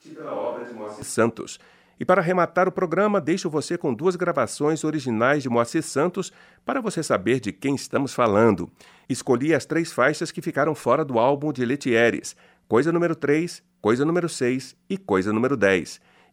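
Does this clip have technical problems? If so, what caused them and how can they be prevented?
Yes. From the start to 1.02 s the speech is roomy, hollow, bass-thin and about 10 dB quieter, likely a switch to a distant microphone. To prevent this, confirm the close microphone is live and routed before recording begins.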